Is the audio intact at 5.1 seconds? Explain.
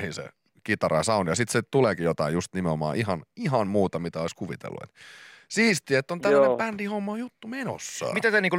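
Yes, the speech plays through cleanly at 5.1 seconds with no audible fault at that moment.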